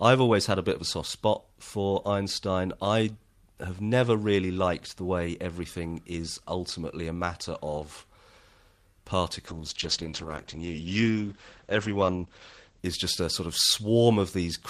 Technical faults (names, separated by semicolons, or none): call bitrate drop